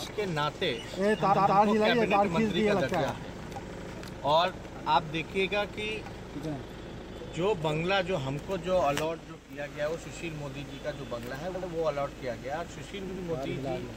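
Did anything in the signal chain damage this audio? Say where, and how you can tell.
Yes. These are repeated frames from the codec or storage stage. Blocks of 131 ms, then 78 ms, replay twice more at 1.32, 3.73, 11.54 and 13.08 s, causing stutters.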